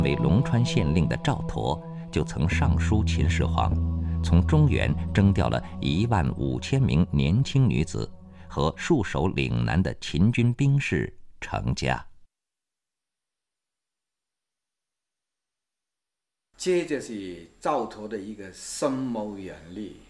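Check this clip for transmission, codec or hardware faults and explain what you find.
Nothing stood out on listening to this clip.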